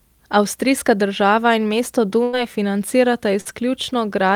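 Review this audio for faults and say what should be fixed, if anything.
There is a burst of packet loss from 2.23 to 2.35 s. About 100 ms of the call never arrived in time. The receiver kept the last sound going for about 94 ms and let it fade, so the gap is a held, dwindling tone or hiss. The speech then picks up further along, with the lost stretch simply absent. Larger jitter buffering and forward error correction would prevent this.

At 3.41 to 3.47 s there is a short concealed packet loss. About 40 ms went missing. The decoder covered it by extending the preceding sound for roughly 44 ms and blending back into the real speech. It comes across as a brief smear or wobble, and a quick consonant could be swallowed. Redundant packet coding on the sending side would prevent it.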